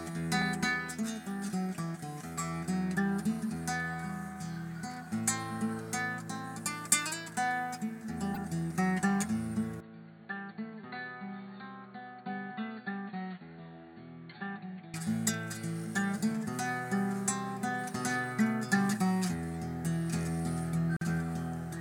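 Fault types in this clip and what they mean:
Input switched to a poorer device: From 9.80 to 14.94 s the sound turns dull and boxy and drops around 10 dB, with a new noise floor well beneath it, likely from a narrower-band input. A spectrogram shows everything above 4.5 kHz vanishing, with no silence at either change.
Gap at a join of encoded pieces: At 20.97 s the continuous sound stops for 47 ms, then resumes where it left off, as padding from separately encoded pieces stays at the join. The waveform shows a flat stretch with smeared edges, and the spectrogram shows a thin vertical blank strip.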